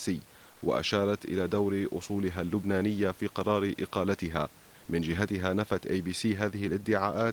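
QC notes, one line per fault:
0.51–0.61 s, comfort noise in place of the background: for about 100 ms the room noise, sitting about 30 dB below the speech, gives way to a flat, featureless hiss about 3 dB quieter, likely discontinuous transmission, where the receiver synthesises filler noise while the sender pauses.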